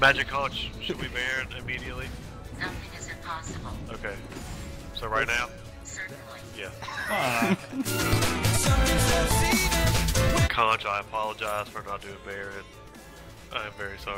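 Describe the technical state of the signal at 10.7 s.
At 10.7 s the signal is intact, with no dropout, distortion, glitch or other technical fault audible at that moment.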